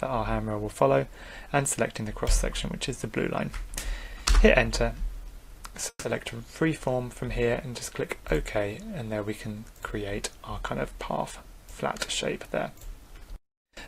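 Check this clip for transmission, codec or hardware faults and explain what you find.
Two delivery faults show up: a short call audio freeze just before the six-second mark, and a jitter buffer speed-up over the last second and a bit.

From 5.89 to 6.07 s there's a call audio freeze. The last bit of sound gets stretched into a fading buzz or hiss for about 150 ms, then roughly 50 ms of silence, and then the audio picks up exactly where it stopped. Nothing's lost, but everything after runs about 150 ms later. That pattern fits packets that likely stalled in transit long enough for the jitter buffer to run dry.

From 12.49 s to the end there's a jitter buffer speed-up. The audio plays about 106% of normal speed with the pitch unchanged, so it feels slightly rushed rather than chipmunky. That's the receiver holding more buffered audio than it wants, probably from the delayed packets arriving in a bunch, and trimming tiny pitch-period slices to catch up. 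It removes around a tenth of a second in total.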